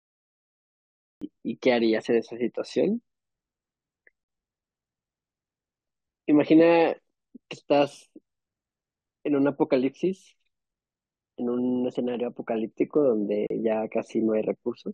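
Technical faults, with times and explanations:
1.17–1.22 s, 4.24–4.29 s and 13.47–13.50 s, gap at a join of encoded pieces: brief silences of about 49, 50 and 34 ms cut into continuous speech with smeared edges, then the sound resumes where it stopped. The untrimmed encoder start delay and last-frame padding were left in at each join. The first gap falls within the smooth fade-in that ends near 1.24 s.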